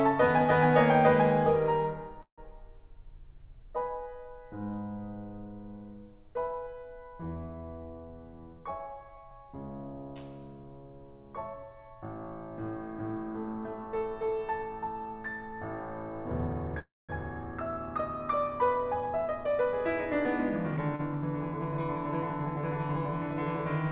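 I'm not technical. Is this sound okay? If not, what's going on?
No. This music has three kinds of problem, all typical of audio sent over a call. The call line itself, which also cuts off everything above 4 kHz, isn't the fault.

A call audio freeze happens twice: from 2.22 to 2.40 s and from 16.79 to 17.11 s. The music stops, a fading buzz or hiss fills in, then silence, then it resumes where it left off. Nothing is lost. It likely comes from delayed data.

A jitter buffer speed-up happens from 8.10 to 9.46 s and from 20.23 to 20.89 s. The music plays about 11 to 12 percent faster at the same pitch. Tiny slices get cut out to catch up, roughly 0.15 s and 0.1 s in total. The tempo feels rushed.

A short stall from a late packet comes at 20.96 to 21.01 s. Data arrived slightly late, so the last sound was held a moment too long, about 34 milliseconds. You may hear a brief buzz or dip. Nothing is missing.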